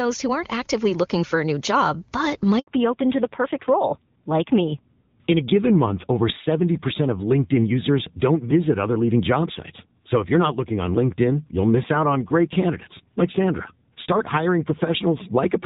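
At 2.59 s a handover gap opens as the call switches networks: 80 ms of missing frames, seen as a flat silent stretch in the waveform until 2.67 s. From 2.67 s a fallback to narrowband follows, with a duller, rougher sound that fits a move from wideband to roughly 7.4 kbit/s narrowband. On a spectrogram, everything above 4 kHz is cut off cleanly to the end.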